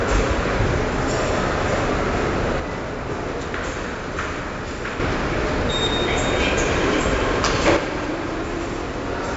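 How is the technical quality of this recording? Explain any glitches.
The technical quality is poor. Heavy coding damage runs through the whole recording, and the level drops twice.

4-bit ADPCM compression is present throughout. Each sample is coded as a coarse 4-bit step from a predicted value, so quantisation error rides along with the signal as a gritty hiss that swells on loud passages and smears sharp attacks. Nothing reaches above about 7.7 kHz, which fits a 64 kbps stream at a reduced sample rate and explains the dull top end. On a spectrogram, the energy stops at a flat ceiling near 7.7 kHz, with a noise haze filling the gaps beneath loud events.

One channel drops out from 2.60 to 5.00 s and again from 7.77 s to the end. At each point the sound falls abruptly by about 6 dB and stays lower. Anything present only on one side vanishes. The likely cause is a stereo channel going silent before a mono fold-down, so the shared material loses half its amplitude. 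On a waveform, the envelope steps down sharply at 2.60 s, recovers at 5.00 s, then steps down again at 7.77 s.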